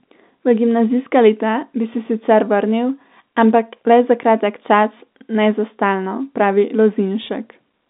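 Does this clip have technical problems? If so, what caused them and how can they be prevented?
No, there are no technical problems: the speech has the narrow, band-limited sound of a normal G.711 telephone line, roughly 200 Hz to 3.7 kHz, with nothing beyond that channel's usual character.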